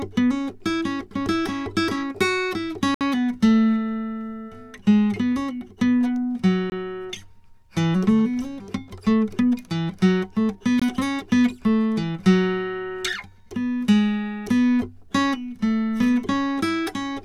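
Blocks of digital silence interrupt this music at 2.94–3.01 s (64 ms), 6.70 s and 10.80 s (about 21 ms each, fitting a 1024-sample buffer). Each is an abrupt hole, pointing to output buffers not filled in time.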